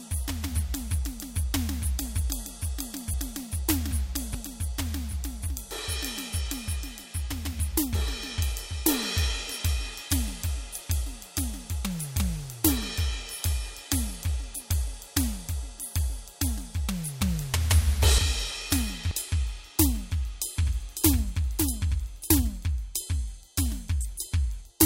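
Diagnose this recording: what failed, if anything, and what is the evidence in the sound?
At 3.14 s the music jumps forward, the signature of compressed frames skipped at the codec or storage stage. A skip of about 400 ms, roughly four frames of 92.9 ms, fits frames missing or rejected as damaged. The spectrogram shows a sudden texture change with no silent gap.

From 20.63 s to 22.71 s there is a doubled audio track: a full-band copy about 5 dB quieter trails by roughly half a second, most likely from a second, slower capture path. On a spectrogram, every onset repeats with no decay or room colour, and the copy starts and stops abruptly.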